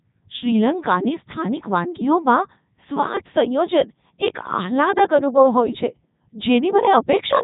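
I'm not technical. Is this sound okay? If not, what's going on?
No. The whole clip went through a Codec 2 vocoder, which rebuilds speech from simple tones, so it sounds robotic and buzzy, with nothing above 3.8 kHz.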